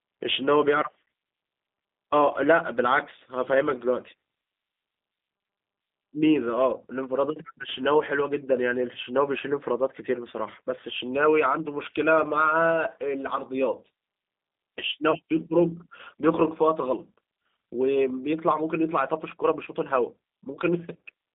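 A speech recording carried throughout by the G.729 codec, heard here in its G.729A form. The line passes only about 200 Hz to 3.7 kHz, so the sound is thin and boxy with no upper air. The codec damage is plainly audible. Every syllable is rebuilt from a vocal tract filter, a pitch track and a handful of pulses per frame, and that leaves a rough, faintly synthetic grain on the voice. The coarseness fits an 8 kbit/s stream. At 15.11 to 15.17 s there is VoIP packet loss concealed by the speech codec. Roughly 30 ms of audio never arrived, which fits one lost packet. The decoder filled the gap by repeating its last pitch and filter settings at falling gain. The result is a brief stretch of fading tone or noise in place of real speech. Each frame depends on the one before, so the voice stays weak or distorted just after 15.17 s before it settles.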